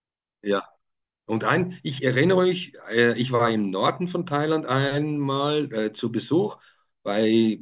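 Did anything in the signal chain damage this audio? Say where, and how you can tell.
No, nothing audible in this speech recording points to damage at any stage of the signal chain, from capture through to playback.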